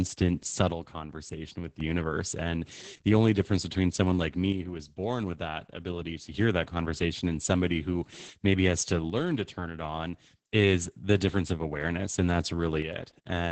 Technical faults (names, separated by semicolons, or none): Opus voice compression; one channel drops out